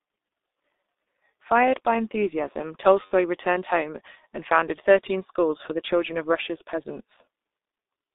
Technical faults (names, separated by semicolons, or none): G.723.1 codec; VoIP packet loss concealed by the speech codec